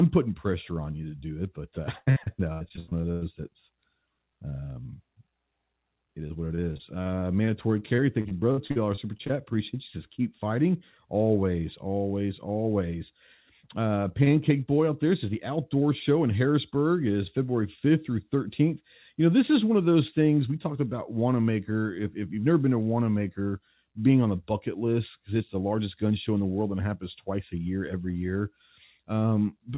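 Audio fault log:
1.98–3.23 s, repeated packet loss (robotic sound): ten dropouts, the longest 100 ms, each filled by stretching the last sound. About 40% of the span is patched, so it turns choppy.
6.27–9.31 s, repeated packet loss (robotic sound): nineteen shorter holes, none over 57 ms, covering about 15% of the span. This gives a lighter, choppy sound within narrowband sound that stops at 4 kHz.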